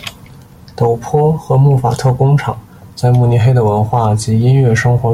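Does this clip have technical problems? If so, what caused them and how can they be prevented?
No, there are no technical problems to report here.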